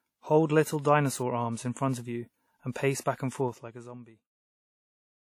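Throughout the speech there is a ringing, washy quality, with hiss that swells and shrinks with the voice. Codec damage is plainly audible. Nothing sounds above 19.6 kHz. The likely cause is WMA compression at a low bitrate, which fits about 48 kbps. Its long transform blocks smear quantisation noise over time.

Pre-echo follows "front of you and", from 2.72 to 2.76 s, spreading 37 ms. It returns after "of you and pace", from 3.00 to 3.06 s, over 58 ms. Each attack lands late in a block. Noise meant for the loud part leaks ahead as hiss. The onset sounds smeared.

Zipper noise runs from 3.46 to 4.15 s. The level drops by around 20 dB. It moves in 2 dB steps, about twenty per second, with no smoothing between them. Each step clicks. Together they make a ticking zip over the sound while the level falls.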